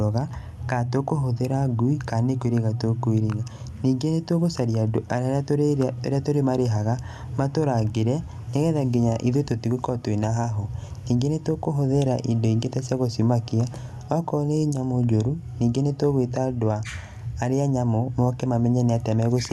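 No technical faults can be heard anywhere in the speech. It reaches the listener through a call path whose high end stops at about 12 kHz, with the light coding texture of Opus that points to a fairly generous bitrate.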